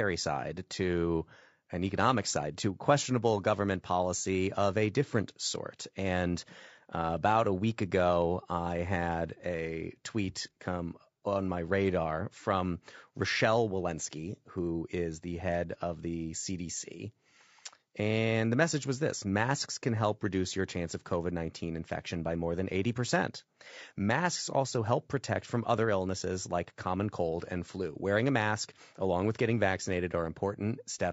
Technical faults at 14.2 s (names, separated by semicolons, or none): low-delay AAC compression